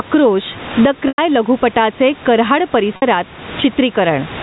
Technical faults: gain pumping; packet loss with pitch repetition

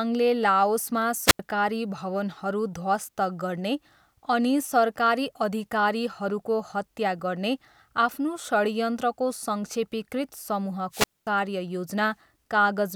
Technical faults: wireless microphone squelch dropout

